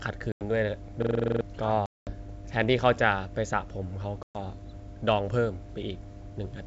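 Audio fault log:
Throughout: mains hum. A steady low tone sits under the speech at 50 Hz, roughly 15 dB below the signal. It comes from a ground loop or a nearby transformer. Power-line current leaks into the audio path. The tone does not change with the speech, and low harmonics ride along with it. It stays through the whole clip.
0.32–0.43 s, 1.86–2.13 s, 4.23–4.38 s: packet loss on an ADPCM call. Each one leaves a hard-edged hole of silence, 90 ms, 210 ms and 120 ms long. Speech packets went missing and silence filled their place. The decoder's adaptive predictor and step size then no longer matched the sender's. So speech comes back slightly distorted. It settles within tens of milliseconds. The longest gap is the middle one.
1.02–1.41 s: system hang loop. One 42.67 ms slice of audio repeats exactly, nine times over. That gives a rough, machine-gun stutter at 23.4 Hz. The computer or driver froze while the sound hardware kept cycling its ring buffer. 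The loop length fits a 2048-sample buffer. Roughly 400 ms of real audio is lost in its place. The speech picks up again after the stutter ends.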